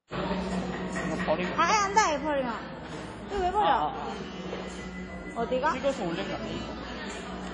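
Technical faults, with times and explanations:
Throughout, WMA compression: ringing, washy sound with a hiss that breathes along with it, and nothing above 10 kHz. Likely a WMA encoder whose long blocks smear quantisation noise over tens of milliseconds and zero weak detail, fitting a bitrate near 32 kbps.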